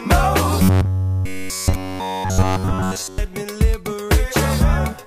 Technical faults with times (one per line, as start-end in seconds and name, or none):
0.62-3.18 robotic sound from repeated short buffers